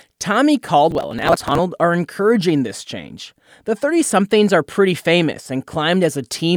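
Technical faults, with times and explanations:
0.91–1.59 s, processor overload crackle: dozens of roughly 10 ms buffers skipped in succession, their hard-edged gaps merging into gritty tearing rather than one clean dropout, before "are encouraging this change".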